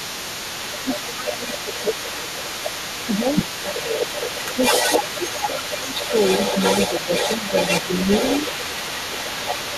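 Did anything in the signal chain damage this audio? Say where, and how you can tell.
Yes. The speech dips at 0.00–2.41 s (deepest, about 15 dB), 3.06–4.03 s, 4.91–5.93 s (about 10 dB), 6.88–7.10 s, 7.41–7.45 s and 7.82–7.90 s. This is speech suppressed in double talk, likely from the call-processing echo canceller. These are partial drops while the other voice is present, not the hard silences of packet loss.

A second voice, the other side's voice leaking through, runs the whole clip at only about 5 dB below the talker. The echo canceller likely left loudspeaker pickup in the microphone signal. Unlike room reverberation trailing the talker, this is an independent voice with its own timing.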